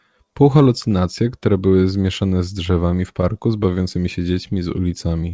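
Clock drift between sender and receiver runs throughout the speech: the sender's clock runs about 5 percent slow, so the receiver's jitter buffer keeps draining. Repeated timing corrections run from 0.24 to 5.32 s. The receiver stretches playback to 95 percent speed by repeating short pieces, adding roughly a fifth of a second and causing slight hiccups. The call path's codec passes nothing above 8 kHz, which fits G.722 at 64 kbps.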